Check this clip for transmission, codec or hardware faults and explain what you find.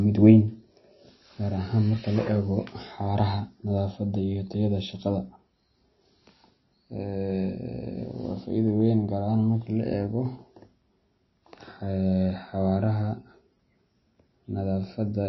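One fault runs throughout. MP3 compression, present across the whole speech clip, is the likely cause. The treble stops dead at 5.8 kHz, and short-changed frequency lines drop in and out between frames. The result is dull, plainly audible codec damage that fits a starved bitrate near 23 kbps.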